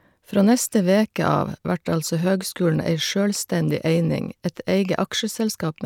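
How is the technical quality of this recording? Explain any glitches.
No glitches or technical faults can be heard anywhere.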